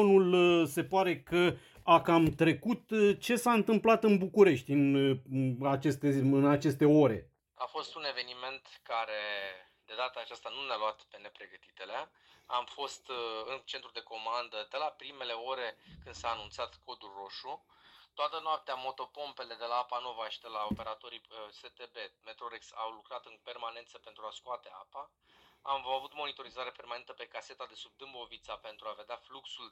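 No technical fault can be heard anywhere in this audio. Nothing interrupts or alters the sound at any point along the way.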